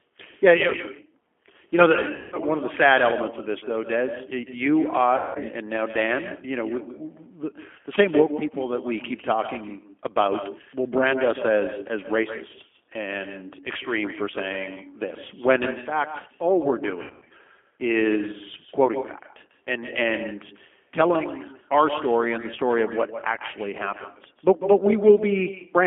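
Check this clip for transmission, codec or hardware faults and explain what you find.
Yes, three kinds of fault are present in this speech recording: an uncancelled echo and G.729 coding damage throughout, plus three bursts of concealed packet loss.

Echo with no canceller runs through the whole clip. A loudspeaker at the far end feeds the microphone, and nothing removes that return. Each phrase comes back roughly 150 ms later, about 11 dB quieter and thinner. On a spectrogram, every syllable's energy pattern repeats as a fainter, slightly blurred copy shifted right by that delay. The waveform shows the same envelopes echoed at lower amplitude.

G.729 codec damage is plainly audible from start to finish. The sound fits an 8 kbit/s G.729A stream. That codec models the voice with a vocal-tract filter, a pitch predictor and a handful of pulses per frame rather than preserving the waveform. 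The speech sounds rough and faintly synthetic. The band is confined to roughly 250 Hz to 3.4 kHz, so a spectrogram shows a hard ceiling at 3.4 kHz and an empty strip below 250 Hz.

VoIP packet loss concealed by the speech codec occurs at 2.16–2.38 s, 5.17–5.38 s and 17.02–17.33 s. In the first two, about 160 ms and 180 ms of audio are missing. The pattern points to runs of roughly eight and nine 20 ms packets. At 17.02 s, 220 ms is lost in pieces scattered over 280 ms, and the longest gap is 100 ms. The decoder repeats its last pitch and filter with falling gain. The voice smears into a buzzy, fading tone, and it stays weak briefly after audio resumes. A spectrogram shows flat, smeared harmonics decaying in level. The waveform shows a tapering, periodic stretch.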